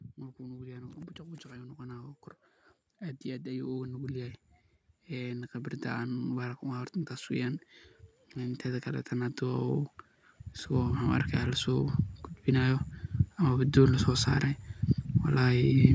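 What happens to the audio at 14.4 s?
Nothing goes wrong at 14.4 s: the speech there comes through intact, with only the ordinary call microphone processing shaping it, its band topping out at 8 kHz.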